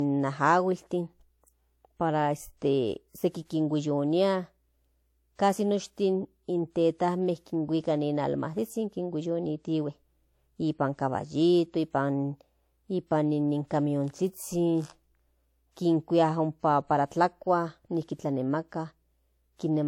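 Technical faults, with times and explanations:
Throughout, transcoding between lossy codecs: two layers of coding artefacts sit together in the speech, and nothing remains above 18.4 kHz. The likely cause is a low-rate HE-AAC encode re-coded as WMA, with the second codec spending bits on the first codec's artefacts.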